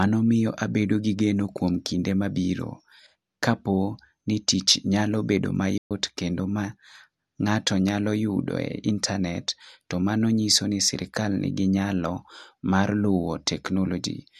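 At 5.78 s the speech cuts out abruptly and the output falls completely silent for about 128 ms, until 5.91 s, when the sound returns. This is a playback stall. The gap lands mid-flow rather than at a natural pause, so it reads as a hiccup in delivery. The likely cause is the player briefly running short of audio data, or its playback thread being held up, so nothing reached the output until it caught up.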